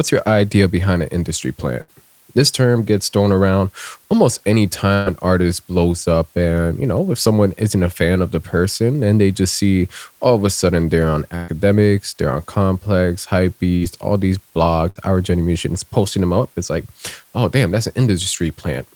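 From start to finish the speech sits over a constant, even hiss, the sign of low bit depth with dither. The noise, about 35 dB below the speech, fits roughly 9-bit resolution. Because dither randomises the rounding error, it stays smooth and never turns into the gritty distortion of plain truncation.

A burst of packet loss occurs at 1.81, 4.94, 11.36, 13.76 and 14.90 s. At each point the receiver stretches the last sound into a fading buzz or hiss, about 60 ms at 1.81, 13.76 and 14.90 s and about 120 ms at 4.94 and 11.36 s. The speech then resumes with that stretch missing, rather than falling to silence.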